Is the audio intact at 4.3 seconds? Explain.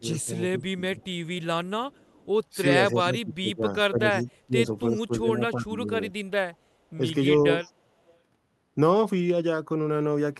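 No. Two faults overlap there. From 2.61 to 6.13 s, speech is suppressed in double talk. The voice dips by up to about 20 dB and breaks up, affecting roughly two seconds in total. This is likely an echo canceller turning the talker down while both sides spoke.

An echo leak also runs from 4.16 to 4.36 s. A faint copy of the voice returns 338 ms late, about 25 dB below the speech. The likely cause is a loudspeaker echo that the far side's canceller failed to remove fully.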